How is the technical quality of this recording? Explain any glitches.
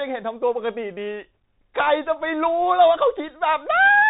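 The quality is poor, with narrowband Bluetooth headset sound throughout the speech. Bluetooth CVSD headset codec coding runs the whole clip: each sample is one up-or-down bit with an adapting step, so s sounds turn scratchy over a granular hiss. A spectrogram shows nothing above 3.8 kHz.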